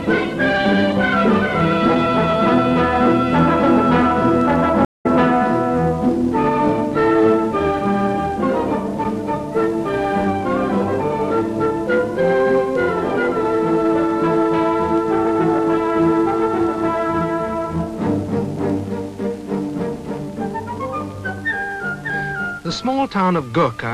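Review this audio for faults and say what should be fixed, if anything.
A stream reconnect happens at 4.85 s. The network connection dropped, and the player stalled, re-established the link and started a fresh decoder partway through the stream. The sound cuts to silence for about 197 ms, until 5.06 s, and then resumes roughly a tenth of a second further on, so a short stretch of material is simply missing. The first frame or two after the gap come back muted or fading in. To prevent this, give the player a larger network buffer and retry logic that rejoins without flushing the decoder.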